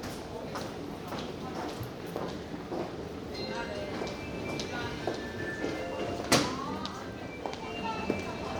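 No technical faults can be heard anywhere in the recording.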